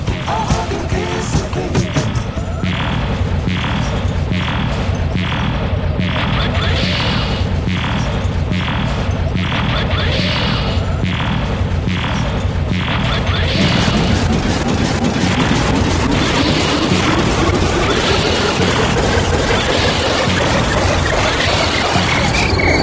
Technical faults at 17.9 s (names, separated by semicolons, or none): none